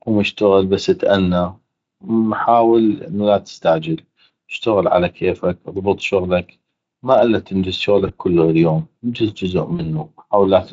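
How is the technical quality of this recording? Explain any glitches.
Two short glitches come from VoIP packet loss concealed by the speech codec. The speech carries light Speex coding.

From 8.07 to 8.12 s, after "شغلك ما الا تنجز" and before "كلو هليوم انجز جزء", about 20 ms of audio went missing. From 9.75 to 9.86 s, after "كلو هليوم انجز جزء", about 40 ms went missing. The decoder filled each gap by repeating its last pitch and spectral shape at falling gain. Each gap sounds like a brief buzzy or noisy smear that fades. The voice stays weak for a moment after.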